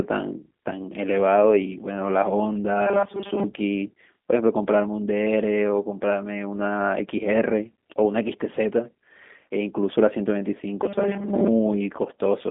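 From start to finish the speech carries the marks of G.729 coding, the narrowband VoIP codec whose sound fits its 8 kbit/s rate. The band is confined to roughly 200 Hz to 3.6 kHz, with nothing above 3.8 kHz, so sibilants and consonant detail are lost. Because the codec resynthesises each frame from a vocal tract filter, a pitch predictor and a few pulses, the damage is plainly audible: the speech sounds rough, buzzy and faintly synthetic.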